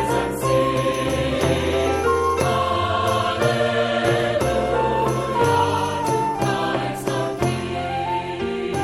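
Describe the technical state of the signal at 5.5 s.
At 5.5 s the signal is intact, with no audible fault at that moment.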